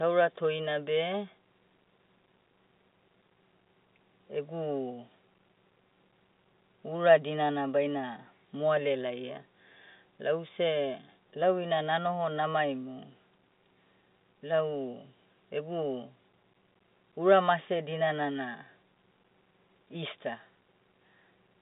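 No technical faults are audible.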